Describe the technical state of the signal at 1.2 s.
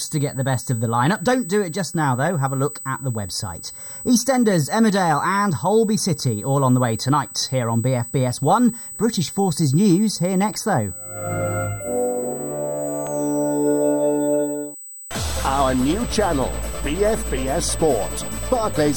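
A USB whine runs through the whole clip, including 1.2 s: a steady 8 kHz tone from USB microframe current leaking into the power or ground. It sits not far below the sound and shows as a thin horizontal line at 8 kHz on a spectrogram.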